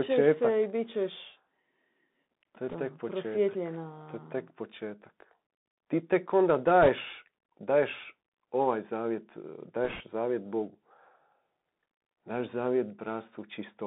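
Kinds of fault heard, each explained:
Bluetooth CVSD headset codec: The speech passes through the narrowband Bluetooth headset codec for the whole clip. Each sample is a single up-or-down bit, which fits a 64 kbps link. Only 250 Hz to 3.7 kHz survives. S sounds turn scratchy over a granular hiss.
bit errors on a Bluetooth voice link: Flipped bits on the headset link cause brief rushing crackle, not loud clicks. Bursts come at 2.69 to 2.76 s after "to je", 6.83 to 6.89 s after "tek onda", and 9.85 to 10.01 s after "daješ ovaj zavjet e". Error rates are a few percent.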